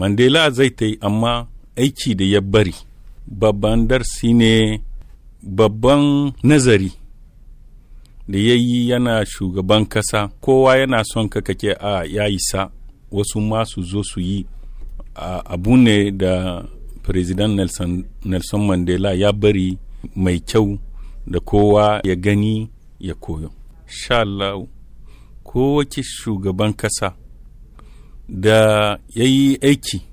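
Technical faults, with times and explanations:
No technical fault can be heard anywhere in the audio, and the signal holds steady throughout.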